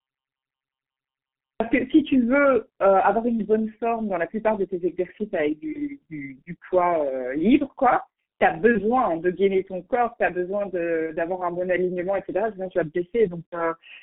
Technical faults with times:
0.00-14.03 G.723.1 codec
0.00-1.60 cut-off start
5.72-5.80 VoIP packet loss concealed by the speech codec
8.72-8.87 VoIP packet loss concealed by the speech codec
11.06-11.12 VoIP packet loss concealed by the speech codec
13.48-13.59 VoIP packet loss concealed by the speech codec

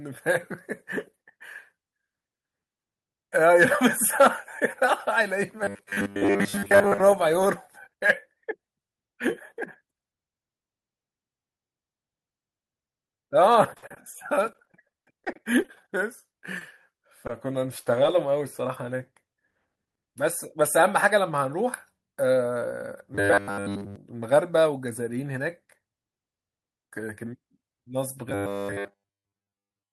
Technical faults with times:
5.64-7.00 robotic sound from repeated short buffers
13.73-15.70 repeated packet loss (robotic sound)
16.59-16.63 short concealed packet loss
17.27-17.31 short stall from a late packet
17.83-17.87 short concealed packet loss
20.27-21.31 jitter buffer speed-up
23.15-23.96 robotic sound from repeated short buffers
28.30-29.93 robotic sound from repeated short buffers

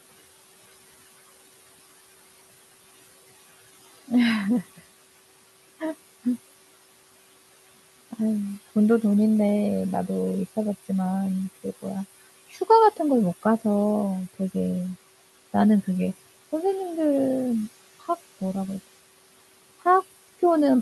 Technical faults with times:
0.00-20.82 noise suppressor artifacts
12.50-12.69 speech cut by the noise suppressor

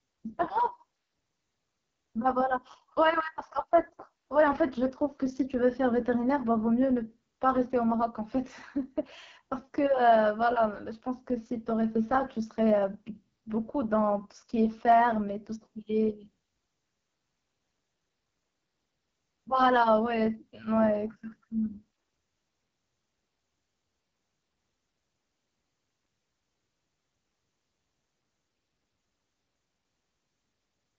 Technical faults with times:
0.00-30.99 AMR wideband (HD Voice) codec

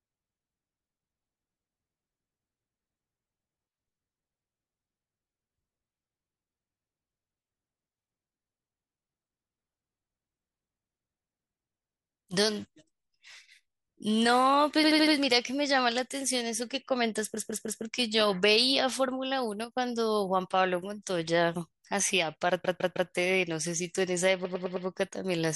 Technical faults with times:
14.83-15.14 repeated frames
17.36-17.83 repeated frames
19.64-19.75 one channel drops out
22.64-23.11 repeated frames
24.44-24.86 repeated frames

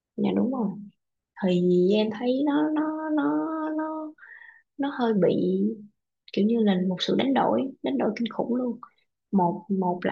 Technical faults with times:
none

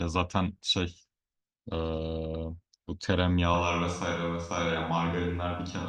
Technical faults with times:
3.54-5.89 switch to a distant microphone

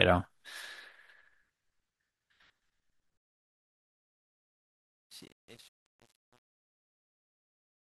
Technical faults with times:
3.17-7.93 truncation distortion on a fade

